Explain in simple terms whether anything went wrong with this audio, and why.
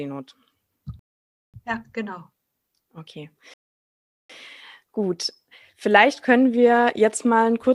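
Rebuffering stalls interrupt this speech twice: from 0.99 to 1.54 s, and again from 3.54 to 4.30 s. Each time, the player used up the audio it had already downloaded and had to wait for more to arrive, so the sound drops into silence. When playback picks up, it continues exactly where it stopped, with nothing skipped. The stalls add about half a second and then about three quarters of a second to the playback.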